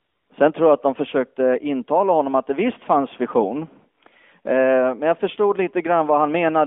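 From 0 to 0.30 s the opening is AMR comfort noise: the sending phone treated the start as silence and sent no speech frames, so the receiver filled those 295 ms with a smooth, steady synthetic hiss in place of the real background. It sits within the narrow 250 Hz to 3.5 kHz AMR-NB phone band, whose light coloration fits the 12.2 kbps mode.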